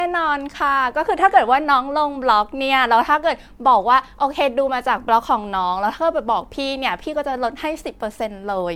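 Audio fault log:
throughout – generation loss. The speech sounds swirly, smeared and hollow, and consonant attacks blur. Nothing is present above 19.9 kHz. The damage is heavier than a single lossy pass would leave. It likely comes from repeated MP3 encoding, about three times, at a rate that fits 96 kbit/s. Each new pass quantises again on a shifted frame grid. Noise and spectral holes from every pass stack up, so the artefacts compound.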